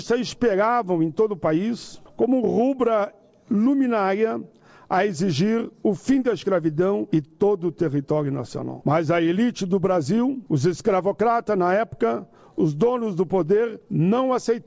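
Nothing stood out on listening; the sound carries the narrowed bandwidth of a G.722 call path, with nothing above 8 kHz.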